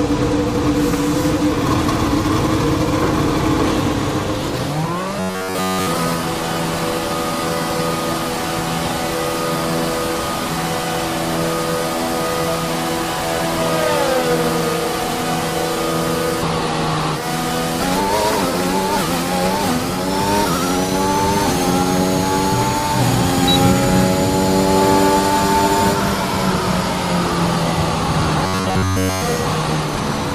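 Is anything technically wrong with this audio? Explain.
Yes. From 5.20 to 5.87 s and again from 28.44 to 29.22 s, the audio turns into robotic sound from repeated short buffers: a rigid, metallic 93.8 Hz buzz. The likely cause is a chunk of about 10.7 ms being looped in place of almost all the incoming audio. A spectrogram shows flat, evenly spaced harmonics at multiples of 93.8 Hz, and the waveform repeats an identical cycle.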